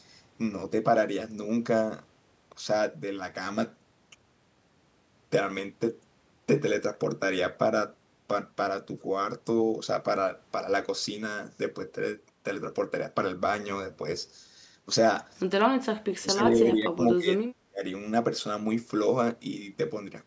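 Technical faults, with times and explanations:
16.06–17.42 s and 17.68–17.82 s, speech suppressed in double talk: the speech dips, dropping about 30 dB, then about 35 dB. Likely an echo canceller mistook the talker for loudspeaker echo while both sides spoke. Waveform shows near-flat gaps; spectrogram shows dark vertical holes.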